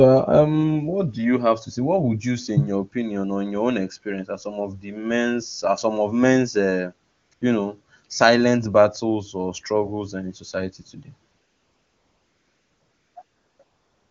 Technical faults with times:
7.11-7.41 AMR comfort noise
11.31-14.10 AMR comfort noise

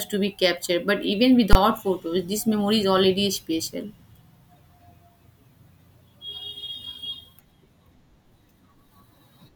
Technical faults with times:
1.53-1.55 invalid numbers at full scale

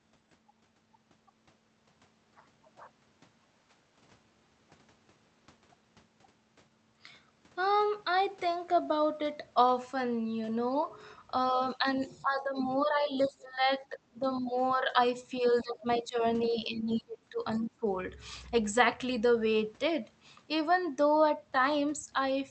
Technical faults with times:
11.76-14.97 speech suppressed in double talk
12.00-12.22 other side's voice leaking through
15.41-17.87 speech suppressed in double talk
17.53-17.58 other side's voice leaking through

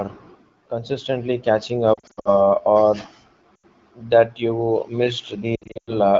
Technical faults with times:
1.93-2.41 lost AMR speech frames
3.55-3.65 lost AMR speech frames
5.55-5.99 lost AMR speech frames

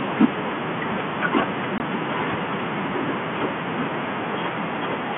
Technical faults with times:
1.78-1.80 packet loss filled with silence

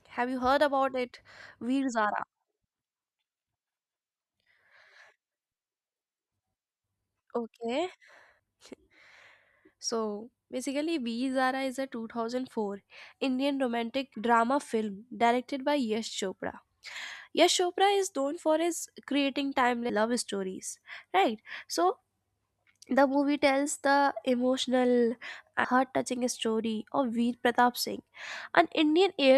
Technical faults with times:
8.39 audio missing between chunks
14.14 audio missing between chunks
19.89 audio missing between chunks
25.64 audio missing between chunks

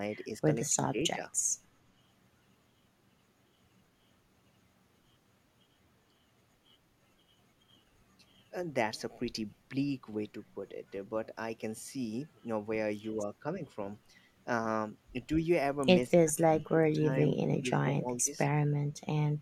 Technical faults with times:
0.70-1.21 speech suppressed in double talk
16.14-17.17 speech suppressed in double talk
17.61-18.30 speech suppressed in double talk

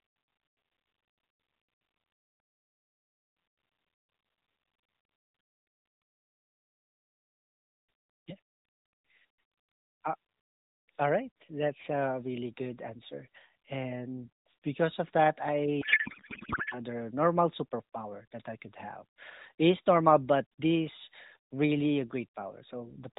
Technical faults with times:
15.82-16.80 codec payload misread

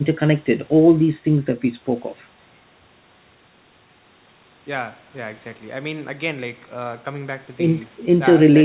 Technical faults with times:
none

